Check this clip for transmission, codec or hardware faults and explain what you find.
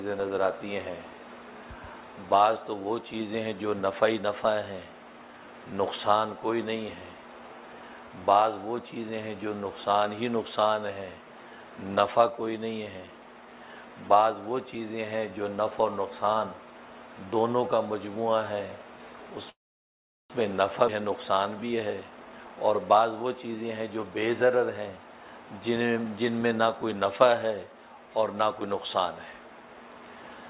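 Three transmission faults occur in close succession between 19.5 and 25 s. They are heard over a call path whose band stops at 4 kHz, with the coarse coding noise of a narrowband telephone codec, which fits G.711 mu-law at 64 kbps.

Call audio freeze, 19.50 to 20.32 s: the sound halts and the gap is filled for about 0.8 s. A brief continuation of the last sound quickly gives way to roughly 0.75 s of silence. Then the audio resumes exactly where it left off, with nothing lost, only delayed. The likely cause is packets stalling in transit until the jitter buffer drained, leaving the receiver to conceal the wait.

Skip ahead, 20.88 to 20.90 s: playback jumps forward with only a few milliseconds of fill at the join. Roughly a fifth of a second of audio is gone, and the material on either side is butted together almost seamlessly. This happens when a stretch is discarded while later audio is already queued, either dropped in transit or thrown out by an overfull jitter buffer. 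It also takes back part of the delay the freeze added.

Jitter buffer speed-up, 21.86 to 24.98 s: the audio runs at about 118% speed with pitch unchanged, sounding rushed. The buffer was holding more than its target after the backlog from the freeze, so the receiver repeatedly cut out short pitch-period-sized pieces. Around half a second is trimmed over these three seconds, bringing the latency most of the way back down.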